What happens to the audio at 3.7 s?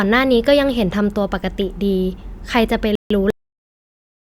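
At 3.7 s there is only dead digital silence: the speech stopped abruptly mid-sound at 3.30 s, with no decay, and stays silent to the end. This is a cut-off end, where the final buffers were never written or played back.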